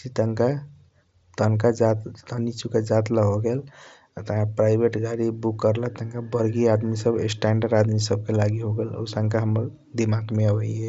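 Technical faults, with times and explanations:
Nothing stood out on listening to this speech, which comes through a Bluetooth mSBC headset link with no content above about 7.7 kHz.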